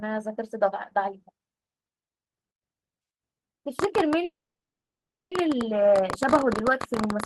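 From 3.79 s to the end of the clip, a train of clicks runs over the speech at about 14 per second on an uneven pace, peaking about 15 dB above the signal. The similar, repeated pulses are likely interference or a faulty connection or power supply, heard as ticking that continues through pauses.

At 4.24 s a call audio freeze begins and lasts until 5.32 s. Packets were likely delayed long enough to empty the jitter buffer, so the receiver extended the last sound briefly before holding roughly 1 s of silence. The speech then resumes exactly where it stopped, with nothing missing, leaving everything afterwards 1.07 s later than it would have been.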